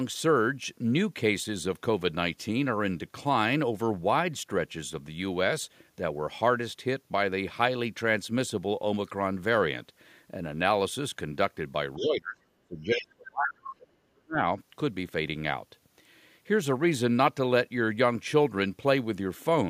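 A speech clip with two faults around 12 to 14.5 s. The other side's voice leaking through appears as brief faint scraps, about 15 dB under the talker, at 11.96–12.07 s and 12.96–13.03 s. It is likely residual echo that the canceller missed. Speech suppressed in double talk follows at 11.97–12.42 s, with dips of roughly 25 dB, and at 12.61–14.49 s, with gaps down to roughly 40 dB. These drops are likely from the canceller ducking everything while both sides spoke, which separates them from network dropouts because they coincide with the leaking voice.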